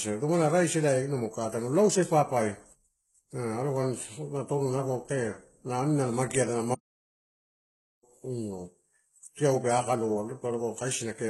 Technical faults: HE-AAC compression; playback stall

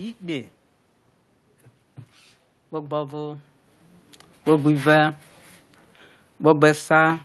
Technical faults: none

